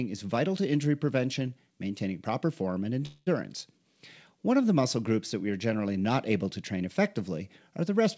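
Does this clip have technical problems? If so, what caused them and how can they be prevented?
Yes. A call audio freeze runs from 3.06 to 3.29 s, after "maintaining proper form and". Packets were likely delayed, so the receiver filled 0.21 s with fading sound. Nothing is lost, but the speech resumes late. A larger adaptive jitter buffer and a more stable network path would prevent this.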